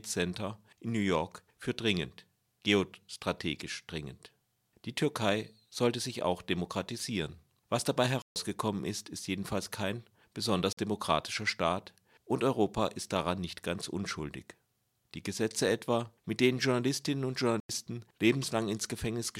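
Three blocks of digital silence interrupt the speech: 8.22 to 8.36 s (about 139 ms), 10.73 to 10.77 s (about 46 ms, which fits a 2048-sample block), and 17.60 to 17.69 s (about 93 ms, fitting a 4096-sample block). Each is a run of silence where output was likely not delivered in time. The sound cuts out and back with no fade. Unlike a fade-out or concealed packet loss, there is no taper and no smeared filler.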